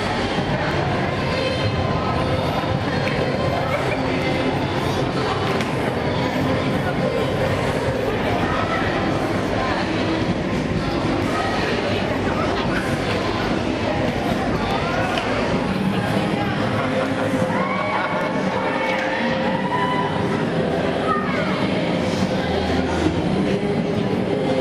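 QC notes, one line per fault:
0.71–21.71 s, clock drift buffer slips: a click every 3.5 s, about seven in all, likely short sample blocks dropped or repeated as two mismatched clocks drift apart.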